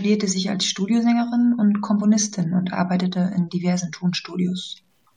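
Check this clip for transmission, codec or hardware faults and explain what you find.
One fault runs through the whole speech clip. The likely cause is low bit depth without dither: the signal appears cut to about 10 bits by plain truncation. Because the error tracks the waveform, quiet syllables and decays turn gritty and grainy, with distortion roughly 50 dB below the speech.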